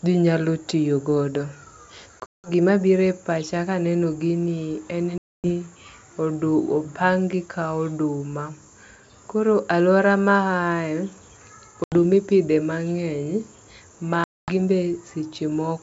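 Packet loss on an ADPCM call cuts hard-edged silent gaps at 2.2–2.5 s (before "gima gire pacha kaneno"), 5.18–5.5 s (after "pacha kaneno gini en"), 11.84–11.94 s and 14.24–14.53 s. The decoder's predictor and step size lose sync, so speech resumes briefly distorted or mis-levelled through the otherwise clean 64 kbit/s G.722 path.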